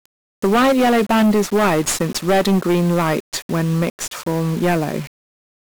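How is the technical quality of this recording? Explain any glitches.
Poor technical quality. Two faults run through the whole speech clip, and together they make it harsh and noisy.

Hard clipping is present from start to finish. The signal is driven about 16 dB beyond what a stage can pass, so roughly a tenth of the samples hit the ceiling. Their peaks are sliced flat. Those flat tops create high harmonics, heard as a constant harsh fuzz on loud syllables.

1-bit DFPWM compression also affects the entire clip, with heavy damage. Each sample keeps only one bit, nudging a tracking level up or down. The coarse steps leave dense broadband noise. Everything sounds gritty and crackly, and the treble sinks under hiss, which fits a rate near 48 kbps.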